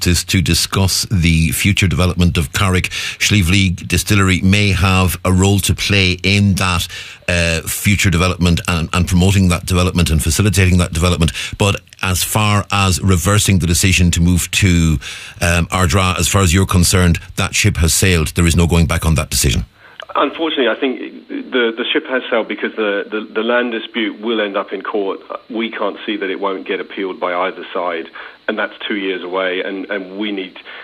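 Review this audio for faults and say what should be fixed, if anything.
No faults can be heard in the audio, so nothing needs fixing. No repair or preventive change is called for.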